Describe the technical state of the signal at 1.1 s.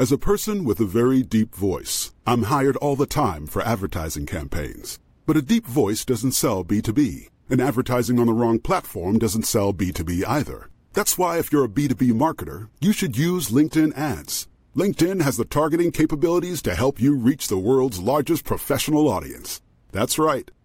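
At 1.1 s the speech signal is intact, with no technical fault present at that moment.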